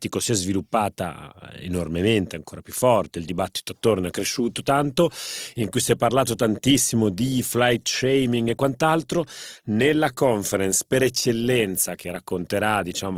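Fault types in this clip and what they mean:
Adaptive stream at a lower bitrate: the connection slowed and the player switched abruptly to a leaner encoding at 3.04 s, right after "sviluppata enormemente ancora più". With no gap, the speech turns grainy, which fits Opus dropping from 64 to 24 kbit/s.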